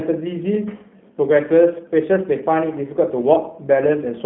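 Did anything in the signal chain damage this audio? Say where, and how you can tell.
Yes. The G.729 codec stage audibly damaged this speech throughout. Nothing passes above 3.5 kHz, and the rough, synthetic texture fits 8 kbit/s pulse-coded speech rebuilt frame by frame.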